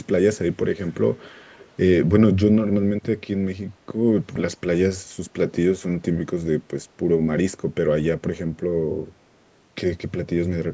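A speech recording with two technical faults. Early on, the far end's echo canceller likely failed to fully remove what its microphone picked up from a loudspeaker playing the call, so some of it was sent back as an echo leak. This is heard as a very faint delayed copy of the speech, trailing about 0.45 s behind, in short scraps at 0.82 to 0.94 s, 1.19 to 1.26 s and 1.42 to 1.69 s, and sitting far below the main speech. Later, a supply such as phantom power switched on or off on a live input, and the voltage step passed through the coupling capacitors as a phantom power thump. It is a deep low thump from 4.36 to 4.42 s that dies away within about 14 ms. The call's microphone processing cuts everything above 8 kHz.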